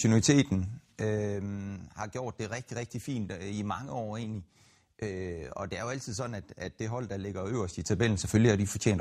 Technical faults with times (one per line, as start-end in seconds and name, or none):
0.40-1.56 zipper noise
7.44-8.16 zipper noise